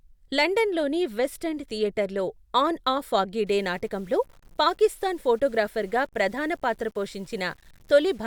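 From 3.47 s, just after "థియేటర్లో ఆన్ ఆ ఫాగ్గి", the speech turns grainy to the end: likely low bit depth without dither, rounded to 8 bits. Error tracks the signal at roughly 35 dB down, showing as a hazy broadband floor and stair-stepped quiet waveform stretches.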